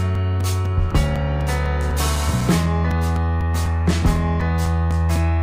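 From 0.15 s to 5.16 s a steady tick runs under the sound, four times a second, each one a brief gap of a few milliseconds where the signal drops to silence and snaps back. These are periodic USB or driver dropouts: something on the system stalls the USB bus or audio driver every 0.25 s, so roughly twenty small chunks of audio never arrive and are filled with silence, turning each loss into a click.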